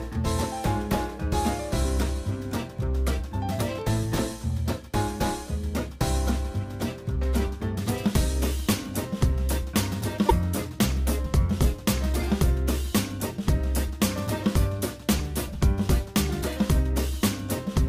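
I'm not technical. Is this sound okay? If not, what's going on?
No, there's one small hiccup. From 10.28 to 10.31 seconds the sound glitches for a split second and seems to skip ahead a little. The likely cause is a broken MP3 bit reservoir. MP3 files pack audio in tiny chunks (here about 26 ms each), and some chunks borrow storage space from earlier ones. If a chunk goes missing, the next one grabs the wrong leftover data and briefly plays garbage before things settle.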